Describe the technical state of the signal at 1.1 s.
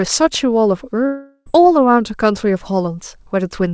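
At 1.1 s the signal sits inside a gap from 1.06 to 1.48 s, likely a long network dropout. The last sound is stretched into a fading buzz, then about 40 ms of silence. Spectrograms show smeared, decaying bands, then a blank strip.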